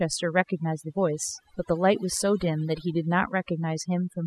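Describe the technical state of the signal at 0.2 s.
At 0.2 s you're hearing overdone noise removal, and it's not a local blip; it runs through the whole speech clip, so this moment sits inside it. The reduction was pushed too hard, so any frequency band hovering near the tool's noise estimate gets pulled way down or switched off, taking quieter parts of the voice along. What's left is a background that drops and breaks up into little twinkling specks.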